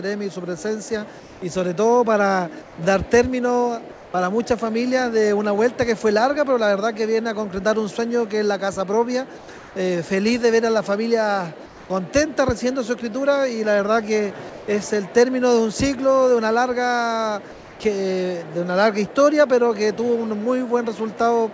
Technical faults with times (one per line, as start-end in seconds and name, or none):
1.20-1.42 comfort noise in place of the background
2.62-2.78 comfort noise in place of the background
3.92-4.14 comfort noise in place of the background
9.38-9.76 comfort noise in place of the background
11.66-11.90 comfort noise in place of the background
14.50-14.68 comfort noise in place of the background
17.52-17.80 comfort noise in place of the background